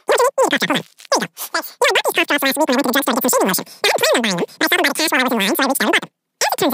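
From start to finish the speech is squeaky and rushed, running about 2.76 times too fast and sitting roughly 17.6 semitones high, well over an octave above where it belongs. That is a wrong sample rate fault: audio captured at 16 kHz is being played back at 44.1 kHz with no conversion in between. Each sample goes by too quickly, so speed and pitch rise together by the same ratio throughout the clip.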